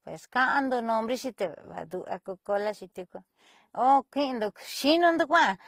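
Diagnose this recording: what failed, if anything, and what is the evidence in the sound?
Codec stage: throughout the speech, a hard spectrogram ceiling at 15.7 kHz and stacked artefacts, likely transcoding between lossy codecs, each re-encoding earlier damage.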